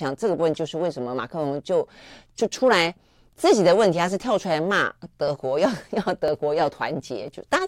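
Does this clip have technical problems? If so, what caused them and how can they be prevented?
Yes. From 5.28 s to 7.28 s there are periodic USB or driver dropouts: something repeatedly stalls the USB link or audio driver about every 0.5 s, and each time a sliver of roughly a millisecond of speech is skipped rather than padded with silence. The result is about five evenly spaced ticks riding on the speech, audible only where there is signal. To prevent it, find and disable the background task or power-saving feature that periodically blocks the USB bus, or use a larger driver buffer.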